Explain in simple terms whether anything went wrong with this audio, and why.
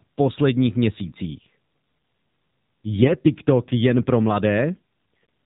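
Something did go wrong, in two ways. The whole recording went through the AMR narrowband mobile codec, the old phone-network speech squeezer. It drops everything above 4 kHz and rebuilds the voice from a simplified model, so the speech sounds muffled, a bit buzzy and synthetic all the way through.

On top of that there are AMR bit errors, at 1.03 to 1.12 s and again at 4.74 to 4.79 s, right after "jen pro". A small share of the data got flipped on a shaky link, so the voice keeps its pitch and loudness but briefly turns hoarse, scratchy and gargly.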